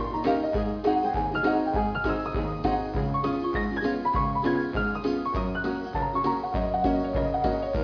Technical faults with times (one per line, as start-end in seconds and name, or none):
none